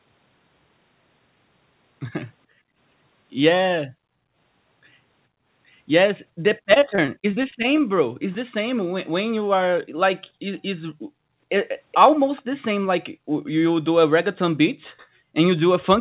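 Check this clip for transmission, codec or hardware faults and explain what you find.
Three kinds of fault are audible: echo-canceller gating of the background, a burst of repeated packet loss, and a brief echo leak. The whole clip is band-limited to 4 kHz by the G.711 mu-law call codec.

Background gated by the echo canceller appears six times: 2.47–2.78 s, 3.94–3.99 s, 6.31–6.43 s, 8.09–8.21 s, 11.22–11.33 s and 13.17–13.31 s. While the loudspeaker plays, the canceller clamps the microphone. The room sound drops by about 40 dB, then returns.

Repeated packet loss (robotic sound) runs from 6.74 to 7.82 s. Short gaps keep recurring, none longer than 24 ms. Each is patched by extending the last sound. About a fifth of that stretch is concealed. The result is choppy and robotic.

A very faint delayed copy of the speech sits at 12.36–12.42 s. It trails by 423 ms and is about 30 dB below the speech. 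This is likely an echo leak, where a loudspeaker's sound got past one side's echo canceller.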